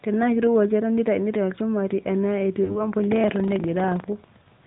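The whole clip is speech squeezed through the AMR narrowband mobile codec. Nothing gets through above 4 kHz, and the vocal-tract-plus-pulses model leaves the voice plainly buzzy and synthetic, which fits a mid-range rate of around 10.2 kbps.

Between 2.64 and 2.89 s there are lost AMR speech frames, about 40 ms of them, which sounds like two frames in a row. The decoder papers over the gap by repeating the last good pitch and spectral settings at falling gain, so the sound smears and dips briefly before the codec recovers.

From 3.0 s to the end there's buffer tearing. The writer and the hardware reader of the ring buffer have drifted until they cross every period. A small slice of each buffer, a couple of percent, holds audio from about 100 ms earlier, spliced in with hard edges. That gives a robotic 25 Hz rattle riding on the signal.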